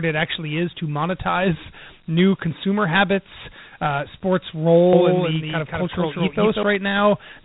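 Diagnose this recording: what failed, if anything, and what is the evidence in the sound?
Dialogic VOX ADPCM, throughout: a codec-stage fault. Nothing sounds above 3.9 kHz and gritty hiss trails the speech, which fits 4-bit ADPCM at 32 kbps.

Doubled audio track, 4.93 to 6.63 s, right after "consumer habits uh sports": a dry copy about 5 dB quieter, about 200 ms late, starts and stops abruptly, likely from a second capture path.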